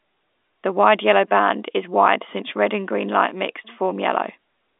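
No technical faults are audible.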